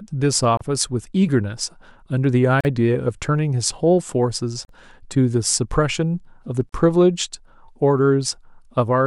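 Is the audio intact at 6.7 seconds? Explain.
No. A gap at a join of encoded pieces opens from 6.69 to 6.74 s, about 43 ms of silence cutting into the speech. Separately encoded segments were joined untrimmed, so each run's start-up delay and padded final frame remain. Its edges are smeared by the codec, and the speech then resumes where it stopped.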